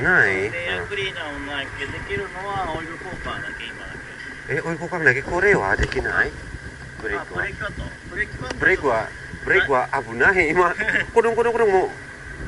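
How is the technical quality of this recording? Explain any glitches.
Nothing in the recording points to a technical problem: the signal stays steady and intact throughout, with no glitches to explain.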